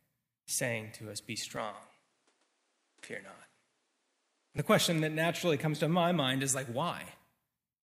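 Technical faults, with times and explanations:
1.57–4.58 s, input switched to a poorer device: the speech loses everything above 11.4 kHz and sounds duller, with faint new background noise far below it. There is no gap and hardly any level change. A switch to another microphone is the likely cause. The duller sound begins just before "question that naturally comes".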